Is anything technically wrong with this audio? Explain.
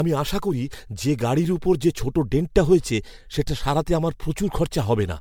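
Yes. Throughout the speech there is generation loss, most likely from the audio being decoded and re-encoded with MP3 about four times, which fits a chain at around 96 kbit/s. Each pass quantises again on a shifted frame grid, so the coding noise and spectral gaps pile up rather than staying fixed. The result sounds swirly, smeared and hollow beyond what one encode at that rate would give, consonant attacks are blurred, and nothing is present above 19.9 kHz.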